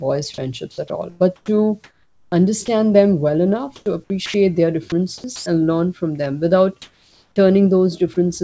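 A speech recording carried over a call path whose bandwidth stops at 8 kHz, consistent with G.722 at 64 kbps. Sound chopped by the voice detector appears from 0.72 to 2.68 s, 3.76 to 4.34 s and 5.18 to 5.46 s. Quiet syllables and word edges drop out and are replaced by synthetic noise, about 0.8 s in total in the first stretch and 0.18 s and 0.16 s in the others. The likely cause is the sender's detector repeatedly gating off low-level speech. From 6.82 to 7.36 s, comfort noise replaces the background. The real background, about 40 dB below the loud passages, becomes a flat, featureless hiss about 3 dB different in level, likely from discontinuous transmission during the pause. From 8.14 to 8.16 s, sound is dropped by the voice detector. About 20 ms of speech is replaced by comfort noise, likely because the detector mistook the sound for background.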